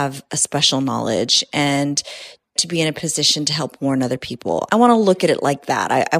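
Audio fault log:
Nothing to log here, as the speech comes through without a single fault worth noting.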